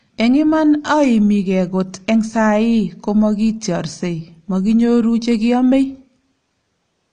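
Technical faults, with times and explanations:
Throughout, AAC compression: the speech comes across dull and smeared, with nothing above 9.6 kHz and plainly audible coding damage. That fits AAC-LC at a low bitrate, likely around 32 kbps, quantising the spectrum coarsely and cutting the top band.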